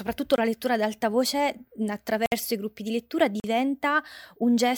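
Abrupt brief holes at 0.36–0.38, 2.26–2.32 and 3.40–3.44 s: blocks of digital silence, 20, 60 and 40 ms long, where the sound cut out and back without fading.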